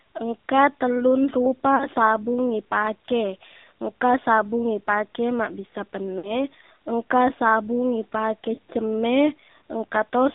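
The whole recording passes through the AMR narrowband mobile codec. Nothing below about 200 Hz or above 3.7 kHz survives, so the speech sounds thin and boxed in. The codec models the vocal tract and drives it with a few pulses per frame. At this low quality that model shows plainly. The speech has a buzzy, synthetic edge, which fits one of the lower AMR-NB modes, around 7.4 kbps.

At 1.76 to 1.85 s there are lost AMR speech frames. For about 40 ms the decoder repeats its last good settings at falling gain. That fits two missing 20 ms frames. The sound smears and sags briefly before "sabung ipake engka sabung". A longer gap follows at 6.18 to 6.33 s. About 60 ms is concealed, which points to three lost frames. The sound stretches and fades further. It returns weak or rough for a moment on "engka sabung".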